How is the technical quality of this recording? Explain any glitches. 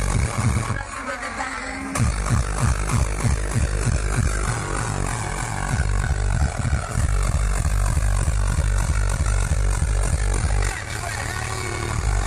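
Nothing stood out on listening that would count as a glitch or technical problem in this recording.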